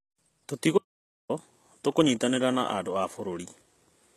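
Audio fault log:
throughout: HE-AAC compression. The speech carries plainly audible codec damage, likely from HE-AAC at a low bitrate in the region of 16 kbps. The upper band is not the original signal but lower bands copied upward and shaped by a coarse envelope, so harmonics fail to line up across the crossover and s sounds come out gritty or metallic. On a spectrogram the energy stops at 12.3 kHz, and the band below that shows a smeared, repeated texture.
0.78–1.29 s: audio dropout to silence. The speech cuts out for about 0.51 s and resumes mid-flow at "tũkũnyitanĩra na andũ a". The gap holds no room tone at all, and whatever was said during it is gone. The input was lost for that stretch while recording carried on writing silence. A disconnected device, a failed link or a stray mute are each likely causes. The waveform shows a flat line with abrupt edges, and the spectrogram shows a blank vertical band.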